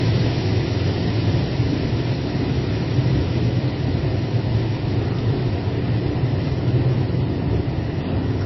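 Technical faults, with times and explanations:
Throughout: transcoding between lossy codecs. Nothing is heard above 5.8 kHz, with dulled detail, which fits a low-bitrate MP3 pass likely followed by Vorbis re-encoding that spent scarce bits on the earlier artefacts and added its own, layering both.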